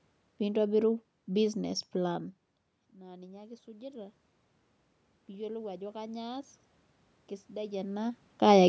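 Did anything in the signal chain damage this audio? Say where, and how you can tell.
Yes. The call processing stage shows automatic gain rising between 2.97 and 4.23 s. After the level at the microphone falls by about 19 dB, which fits the talker moving back from the microphone around 2 seconds in, the gain control gradually raises its gain by about 5 dB over that span. You can hear the voice and the room noise swell together, which marks it as a gain change in the processing rather than a change at the source.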